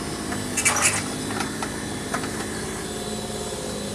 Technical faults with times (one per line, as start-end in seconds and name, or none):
none